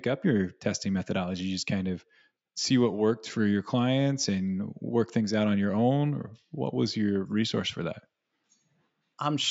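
No faults to report in this speech; the only processing audible is the call microphone chain, whose high-pass filter removes the lowest bass as intended.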